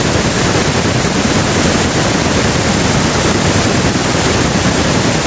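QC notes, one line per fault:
No faults found; the speech shows normal call microphone processing with nothing above 8 kHz, and room noise sits about 29 dB below it.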